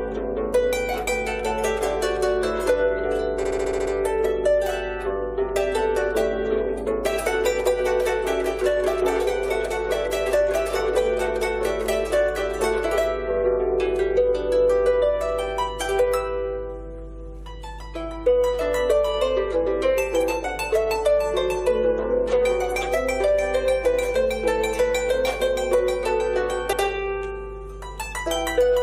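Mains hum runs under the whole recording. It is a steady low tone at 50 Hz, sitting roughly 15 dB below the signal. The power line is leaking into the signal path, most plausibly through a ground loop or a nearby transformer. A 50 Hz hum points to a European-style supply.

Repeated frames appear from 3.43 to 3.91 s. A short block of about 70 ms plays over and over, eight times in all. It sounds like a rapid mechanical stutter. That block length fits a run of three compressed frames. The section adds nearly half a second to the audio.

Repeated frames occur again at 26.72 to 26.81 s. This time a block of about 93 ms plays once more, right after itself. It sounds like a brief hiccup. That length fits four frames being sent twice. The repeat adds about 0.09 s.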